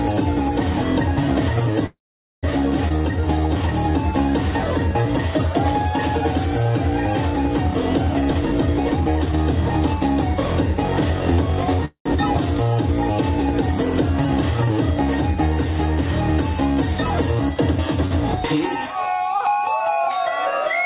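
At 1.86 to 2.45 s the audio freezes: the last sound continues as a fading fill for about 0.57 s, roughly 0.47 s of it silent, then resumes with nothing lost. This call audio freeze likely comes from held-up packets draining the jitter buffer. At 2.89 to 2.92 s a skip ahead drops roughly a tenth of a second of audio, splicing the two sides almost directly. From 2.97 to 3.68 s a jitter buffer slow-down repeats pitch periods to rebuild reserve, adding 118 ms and running at 85% speed with drawn-out sounds. From 8.21 to 10.19 s a jitter buffer speed-up trims short pitch-period pieces, removing about half a second so the sound runs hurried at 128% speed. At 11.85 to 12.08 s a second call audio freeze fills about 0.2 s, including roughly 0.1 s of silence, then continues intact. At 18.06 to 18.13 s a short stall from a late packet stretches the last sound by 54 ms, a brief held sound with nothing missing. 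Throughout, there is nothing above 4 kHz, which fits a narrowband G.711 call codec at 64 kbps.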